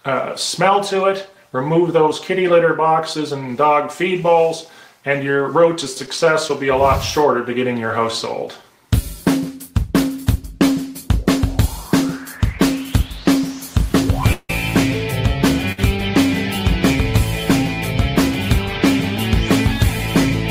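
At 14.33 s the audio stops moving forward for about 161 ms, until 14.5 s. The last sound carries on as a decaying buzz or hiss that thins out and goes silent for roughly the final 40 ms before the audio resumes from exactly where it left off. That is a call audio freeze, likely from packets held up in transit so that the jitter buffer drained. Nothing is skipped; the audio simply runs about 161 ms later afterwards. The fade into silence is what separates it from a brief stall.

At 15.72 s there is a short stall from a late packet, lasting about 63 ms, to 15.79 s. One packet missed its playout time, the buffer briefly ran dry, and the receiver stretched the sound that was already playing until the packet turned up, then continued from the same point. The result is a sound held slightly too long with a slight buzz or dip, without the decay into silence heard at 14.33 s. Nothing is lost, and the delay grows by a further 63 ms.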